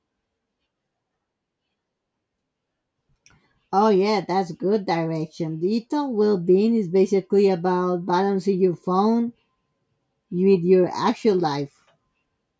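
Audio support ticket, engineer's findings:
No faults found on listening; no action required.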